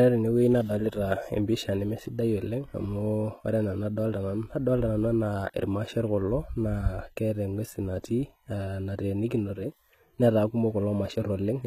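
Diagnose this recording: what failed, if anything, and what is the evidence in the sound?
The codec stage is where this went wrong. Throughout the speech the top end sounds bright but fake, the s sounds gritty and lispy, and nothing comes through above about 14.9 kHz. That's likely HE-AAC compression at a low rate, around 20 kbps, with band replication rebuilding the treble from copied lower bands.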